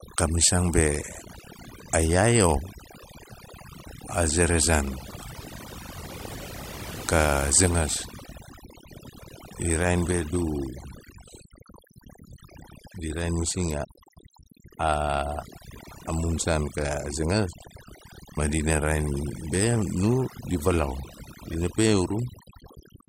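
From start to finish, overdone noise removal shapes the recording: a noise reduction stage was pushed far too hard, so any frequency band sitting close to its noise estimate gets pulled down sharply or shut off entirely. Softer parts of the speech fall below that line and are stripped out with the noise. The background in the gaps drops away and breaks up into twinkling specks.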